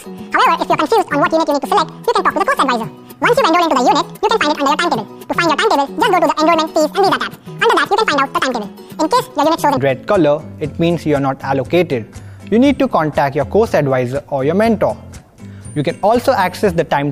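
From the start to about 9.8 s, there's a section at the wrong speed: it runs 1.89 times too fast, likely from being played against the wrong clock, so everything sounds hurried and roughly ten semitones high until normal speed returns.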